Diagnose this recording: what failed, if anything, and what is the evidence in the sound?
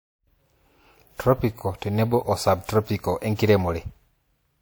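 Codec stage: throughout, the speech carries two overlaid sets of compression artefacts with nothing above 20.1 kHz, likely transcoding between lossy codecs, which fits MP3 re-encoded as low-rate WMA.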